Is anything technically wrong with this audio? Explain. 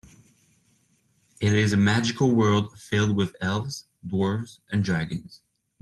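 No, nothing technically wrong.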